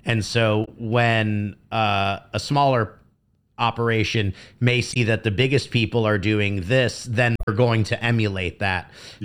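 Speech clip with damaged data in a compressed stream at 0.64–0.68, 4.92–4.97 and 7.36–7.49 s: the decoder loses frame sync, giving brief glitches that show as broadband smears or blocky waveform glitches.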